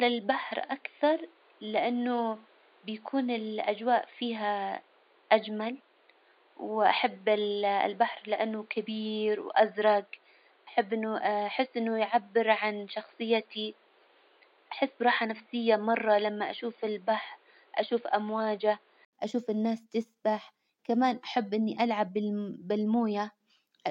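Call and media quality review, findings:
Input switched to a poorer device, 0.0–19.13 s: speech narrowband and boxy, nothing above 4.7 kHz, noise floor about 35 dB below the speech, no level change. Likely a capture-device or headset call-profile change. 80 ms dropout at 19.13 s, full bandwidth returns before "أشوف الناس تسبح كمان".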